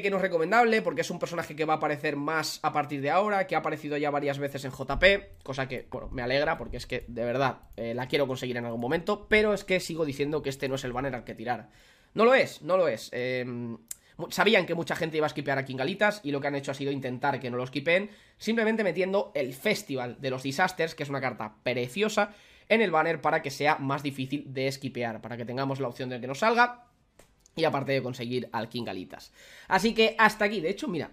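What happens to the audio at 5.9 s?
At 5.92 to 5.95 s, compressed frames are skipped: whole frames never reach the output, so the audio jumps ahead by around 50 ms.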